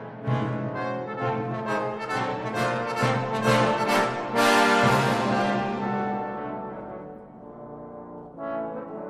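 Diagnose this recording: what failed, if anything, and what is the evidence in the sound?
Nothing failed: no stage in the chain, from wiring and conversion through buffering, processing, transport and playback, leaves any audible sign of trouble anywhere in the recording.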